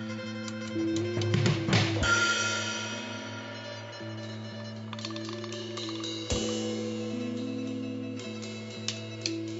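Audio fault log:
No faults are heard anywhere in this music. There is nothing here to log.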